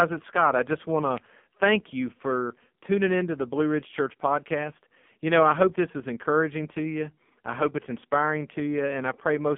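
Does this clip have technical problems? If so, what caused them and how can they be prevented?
Yes. AMR narrowband mobile codec damage runs throughout the clip. Nothing above 3.6 kHz survives, and the line band sits between 150 Hz and 3.5 kHz, giving a thin, telephone-like speech sound. The codec models the vocal tract and excites it with a few pulses per short subframe. Here the artefacts are heavy: buzzy, synthetic speech that fits one of the lowest AMR-NB modes, around 5.9 kbps. To prevent this, record or route the call through a wideband codec at a higher bitrate.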